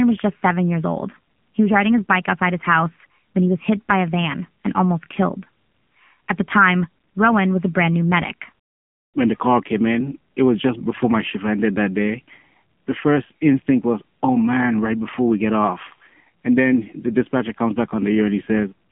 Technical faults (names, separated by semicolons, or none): AMR narrowband mobile codec